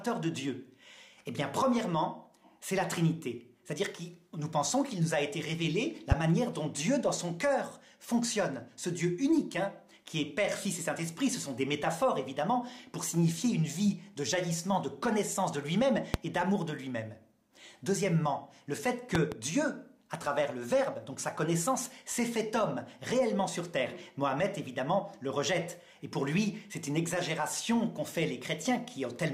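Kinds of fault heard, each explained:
Loud pop: sharp pops jump well above the sound, which continues underneath, at 6.12–6.14 s and 16.14–16.17 s, with a quick double pop at 19.15–19.35 s, peaking roughly 20 to 25 dB over the signal; likely a sudden voltage step or pulse entering the chain.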